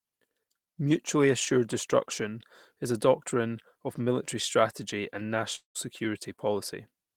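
From 5.55 to 5.77 s the speech breaks off. A fading buzz stretches the last sound, then brief silence follows. This is likely a long network dropout.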